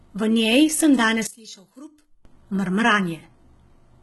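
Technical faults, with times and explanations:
Throughout: HE-AAC compression. The treble is gritty, with metallic, lispy s sounds and nothing above 11.8 kHz. The likely cause is heavy HE-AAC coding, pointing to a bitrate around 16 kbps, where upper bands are copied up from lower ones rather than coded, so harmonics no longer align.
1.27 to 2.25 s: one channel inverted. The speech drops by about 21 dB, leaving only a faint residue. The likely cause is one stereo channel flipping polarity, so the centred voice cancels when both channels are summed to mono.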